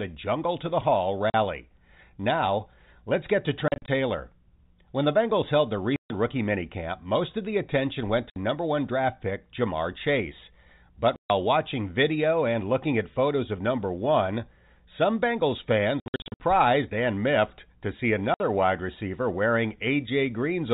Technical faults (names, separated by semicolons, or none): packet loss filled with silence